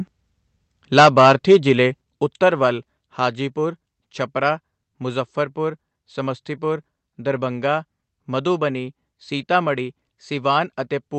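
From 0.97 to 1.72 s, the loudest speech gains a harsh crackle. This is likely microphone overload, with peaks about 9 dB past the converter's limit. The waveform shows flattened tops, and the spectrogram shows broadband splatter.

At 1.0, 2.01 and 3.03 s, the microphone volume stepped down abruptly, by about 2, 5 and 3 dB. This was likely the call software's automatic correction. The waveform envelope drops in clean steps, and the spectrogram dims evenly up to its 8 kHz ceiling.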